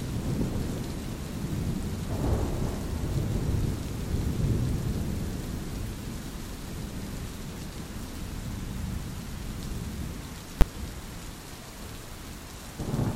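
At 10.61 s there is a single hard bang, far louder than anything around it, gone almost before it registers. This is invalid numbers at full scale: a calculation in the processing chain returned infinite or undefined values, and these were forced to the largest value the format can hold. The output jammed at full scale for a block of about 10 ms, so short that its leading and trailing edges fuse into one sharp crack.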